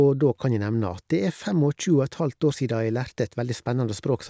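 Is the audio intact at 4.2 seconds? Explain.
Yes, at 4.2 seconds the speech plays through intact, with no dropout, click, distortion or other fault at that moment.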